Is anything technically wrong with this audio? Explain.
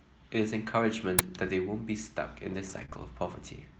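Yes. There are three kinds of fault in this speech clip.

At 1.19 s there is an uninitialised buffer. About 5 ms of leftover memory played as samples, giving a loud crack.

From 2.53 to 2.83 s and from 2.93 to 3.03 s, there are lost packets rebuilt from error correction. Low-bitrate backup copies replaced the missing audio. The sound turns rougher and noisier.

From 2.85 to 2.90 s and from 2.90 to 2.93 s, there is short concealed packet loss. About 20 ms went missing each time. The decoder extended the previous sound, which heard as a brief smear or wobble.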